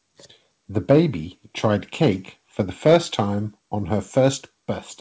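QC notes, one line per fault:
0.9–1.0 s and 2.6–3.2 s, microphone overload: the loudest syllables take on a harsh, crackling edge as their peaks are flattened, likely from input gain set too high so the converter runs out of range, about 5 dB over in the first burst and about 6 dB over in the second. The first is brief but dense, with a fair share of samples hitting the ceiling. The longer second stretch clips only its occasional tallest peaks. Unlike codec distortion, the crackle tracks level alone and vanishes on quieter sounds, and the 8 kHz top end set by the wideband call path stays unchanged through it.
2.95 s, microphone volume stepped down: in the middle of the second overload the whole signal, voice and background together, drops about 2 dB in a single instant and stays there. This is likely the call software reacting to the clipping by cutting the device's input volume in one step. 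A noise gate or compressor would recover or pump, and a fade would glide, but this is one clean step that holds for the rest of the clip.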